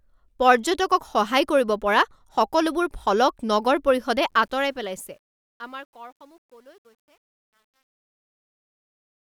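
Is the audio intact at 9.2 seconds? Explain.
No. Truncation distortion on a fade covers 4.30 to 9.33 s, and 9.2 s sits inside its worst stretch, from 5.54 to 9.33 s. The fade-out passes through a volume stage that keeps too few bits and adds no dither, which fits a 10-bit word length. Near the bottom, the waveform collapses into a few square steps, so the speech turns gritty.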